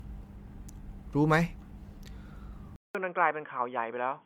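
Repeated lossy encoding, likely around five MP3 passes at roughly 100 kbit/s each, causes generation loss throughout the speech: fresh quantisation on shifting frame grids piles up noise and spectral holes, so the sound is swirly, smeared and hollow, with blurred attacks, though content reaches 20.1 kHz.

At 2.76 s the input was switched to a poorer device, likely a narrower microphone or headset profile. After a 0.19 s silence, everything above 3.4 kHz disappears, the level drops about 5 dB, and a new noise floor sits about 45 dB below the signal, making the speech dull and boxy to the end.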